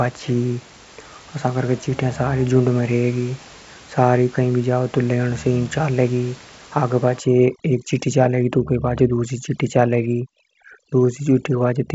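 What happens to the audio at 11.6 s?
At 11.6 s you're inside a stretch of overdone noise removal that runs from about 7.20 s to the end of the clip. The denoiser is set so hard that it pulls down any frequency band near its noise estimate, so the background drops and breaks up into twinkly specks.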